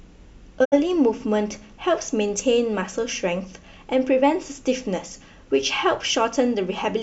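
A speech recording with one digital broadcast dropout, from 0.64 to 0.74 s. The sound fades to silence over about 20 ms and stays muted while the receiver discards corrupted frames. Roughly 64 ms of programme is lost, which fits two failed frames.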